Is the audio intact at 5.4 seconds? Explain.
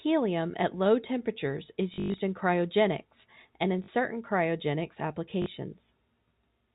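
No. Packet loss with last packet repeated hits from 5.42 to 5.46 s. About 40 ms is lost, fitting two 20 ms packets, and each is refilled by replaying the previous one. This gives a brief robotic stutter.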